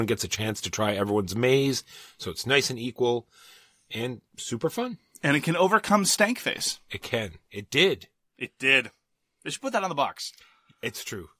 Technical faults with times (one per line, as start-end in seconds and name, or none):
none